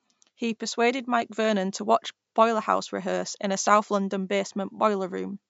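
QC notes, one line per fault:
Nothing to flag on this speech clip, just the normal call microphone processing taking out the lowest bass, which is how a call path ordinarily sounds.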